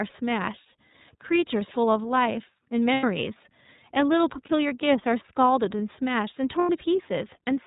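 The whole recording passes through the iLBC codec, likely in its 30 ms-frame mode at about 13.33 kbps, which codes each frame's excitation independently and discards everything above 4 kHz. The speech sounds narrowband, with plainly audible roughness and a synthetic edge.

Lost iLBC frames occur at 2.93–3.04 s, 4.46–4.50 s and 6.60–6.70 s. The decoder fills each gap by repeating the last pitch cycle mixed with noise, heard as a brief buzzy, held vowel. The first and last gaps last about 90 ms, which fits three consecutive frames, and the middle one fits a single 30 ms frame. The voice is right again almost at once after each gap.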